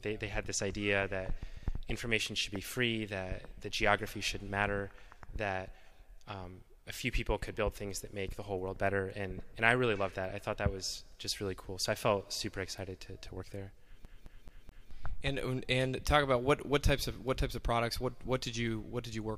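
At 14.05 s the audio gets stuck on one CD turn: a 215 ms slice repeats four times until 14.91 s, each jump marked by a tiny mute, a classic skip.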